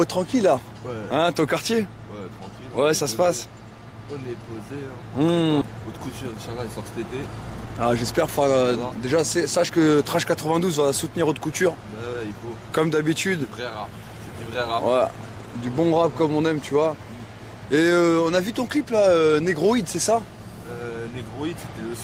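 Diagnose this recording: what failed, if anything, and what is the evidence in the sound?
Jitter buffer speed-up, 7.5 to 9.71 s, at the network jitter buffer: audio runs about 110% fast at unchanged pitch, as pitch-period slices totalling about a fifth of a second are cut.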